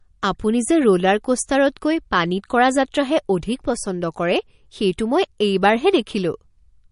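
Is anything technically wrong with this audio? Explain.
Yes. Throughout, there's plainly audible MP3 compression damage: nothing above 10.6 kHz, plus a watery, swirly texture on the speech, likely from a starved encoder, which fits roughly 40 kbps.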